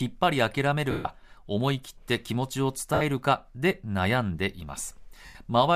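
At 0.91 to 1.05 s, 2.94 to 3.02 s and 5.26 to 5.35 s the speech turns into a brief hissy smear that sinks toward silence, longest in the 140 ms first gap, shorter at 70 ms and 90 ms later. These are lost LE Audio frames, consistent with runs of 10 ms frames going missing. The likely LC3 decoder concealed each gap by repeating the last spectrum with scrambled signs and fading it, which strips the pitch and leaves noise.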